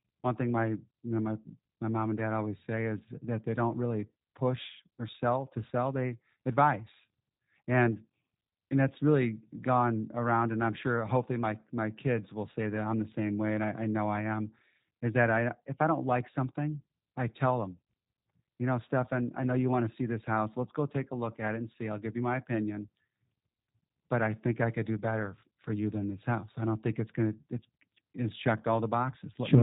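Throughout, G.729 codec damage: speech rebuilt from sparse pulses sounds rough and synthetic, with nothing above 3.8 kHz, fitting an 8 kbit/s codec.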